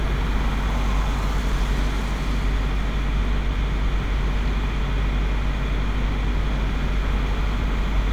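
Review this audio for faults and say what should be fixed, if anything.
No faults; nothing needs fixing.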